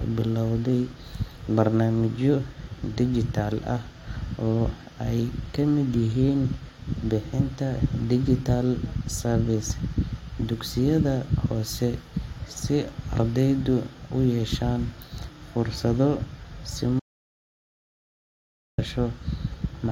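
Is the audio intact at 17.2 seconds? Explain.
No, there is an audio dropout to silence from 17.00 to 18.78 s, and 17.2 seconds falls inside it. The speech cuts off mid-flow and returns just as abruptly about 1.78 s later, with a dead gap between and no room tone. The likely cause is that the input signal was lost through a disconnected device, a failed link or a stray mute while recording carried on writing silence, so whatever was said in that span is gone.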